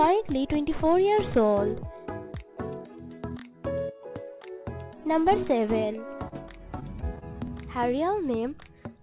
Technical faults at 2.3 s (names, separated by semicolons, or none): none